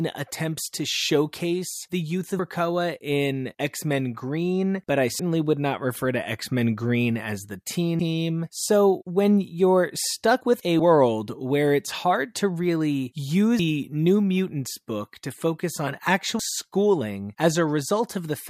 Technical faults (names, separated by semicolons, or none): audio missing between chunks